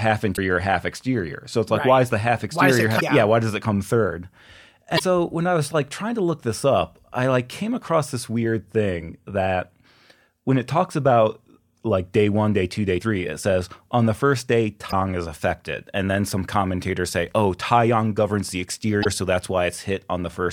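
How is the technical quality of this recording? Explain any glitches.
The speech has five short glitches from damaged data in a compressed stream, each about 55 ms, at 0.33, 2.97 (just before "yeah why does it"), 4.95 (before "when I was like"), 14.88 and 19.01 s. The first, at 0.33 s, comes right before "half exterior". Corrupted bytes make the decoder misread frames and lose sync while it hunts for the next header, so you get a quick chirp, squawk, click or short hole.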